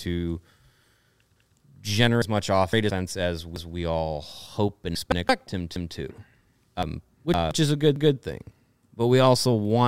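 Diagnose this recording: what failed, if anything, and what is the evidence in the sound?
Overlapping chunks at 1.36–1.56, 3.56–3.76, 5.76–5.96 and 7.96–8.16 s. This is a buffer-stage fault. The speech is processed in 2.0 s blocks, and each new block begins 200 ms before the previous one ended, so that 200 ms of speech plays twice at every join. The result is a stutter or click, returning every 2.2 s with steady spacing, which points to fixed-size buffering rather than random dropouts.

Chunks out of order at 2.22–2.90, 4.95–5.29 and 6.83–7.51 s. This fault sits at the network or storage-write stage. The audio moves in blocks of about 171 ms. At 2.22 and 6.83 s a block arrives three blocks late, and at 4.95 s one block late, and each is played after the material that should follow it. No speech is lost, but each stretch sounds jumbled.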